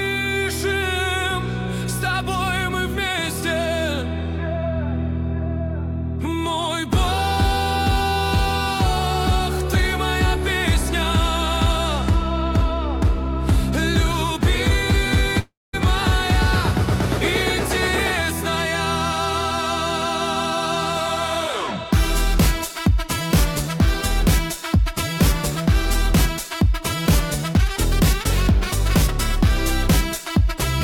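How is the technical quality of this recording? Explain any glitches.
There's one real glitch. At 15.39 s the sound smears into a fading buzz or hiss, drops to silence, then resumes at 15.75 s, skipping about 340 ms. That's likely a long network dropout, with the receiver papering over the gap.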